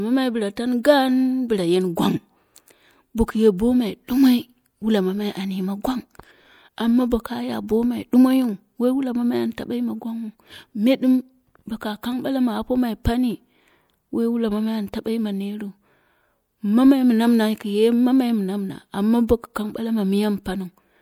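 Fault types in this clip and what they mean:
Pre-echo: A burst of hiss arrives just before a sharp onset near 0.83 s. It lasts about 16 ms. The codec codes the audio in blocks and spreads its coding noise across each block. Here a sudden attack sits late in one block. The noise scaled for that loud attack leaks into the quiet stretch ahead of it. So the hiss comes before the sound itself. The attack loses its crispness and sounds smeared.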